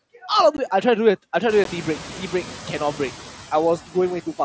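A speech recording carrying two kinds of fault. Throughout, a noise suppressor is cutting the bands it judges to be steady noise frame by frame, but by only about 5 dB, so the background is lowered rather than removed. The leftover noise dips in the gaps and swells back under the talking. This is most audible after the room noise climbs by about 20 dB at around 1.5 s. Twice, at 0.57 s and 1.64 s, the link between headset and phone drops voice data. These are unconcealed Bluetooth headset packet losses of about 15 ms each, which fits two consecutive 7.5 ms mSBC packets going missing. Nothing fills in the lost audio, so each one is a brief hole with hard edges that can tick or click. The mSBC headset link limits the sound to about 8 kHz.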